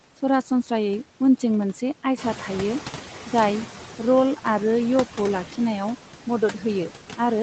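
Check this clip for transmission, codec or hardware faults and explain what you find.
The speech shows three noise suppression faults; the Opus call path and the call's microphone processing account for the lack of anything above 8 kHz, and the sound fits a bitrate near 20 kbps.

Noise suppressor artifacts run through the whole clip. The suppressor turns down each band it judges to be steady noise, by about 10 dB, frame by frame. The residue swells under the speech and sinks in the gaps.

The noise suppressor is catching up from 2.17 to 3.02 s. The room noise jumps by about 10 dB at roughly 2 s, and the suppressor's noise estimate takes 850 ms to adapt. Until then the louder background comes through with only about 7 dB of reduction before settling lower.

Speech is cut by the noise suppressor between 6.26 and 6.65 s. Mistaking quieter parts of the speech for background, the suppressor pulls them down by as much as about 10 dB, over roughly 150 ms in total, so those portions sound swallowed and faint.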